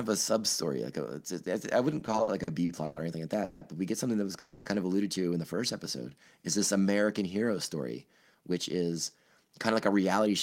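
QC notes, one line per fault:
1.99–2.98 s, repeated stalls (stutter): packets kept arriving late, so the buffer emptied eight times, stretching the last sound for 270 ms in total (longest 110 ms) before "or anything like", so the audio drags.
3.44–3.63 s and 4.39–4.68 s, call audio freeze: likely delayed packets emptied the jitter buffer, so the receiver held the last sound as a fading buzz for 170 ms after "or anything like" and 270 ms after "get something that was". Nothing is lost, but each adds a gap.
7.13–10.27 s, jitter buffer speed-up: an overfull buffer was trimmed by cutting about 200 ms of short pitch-period slices, so the audio runs at 107% speed at unchanged pitch and sounds hurried.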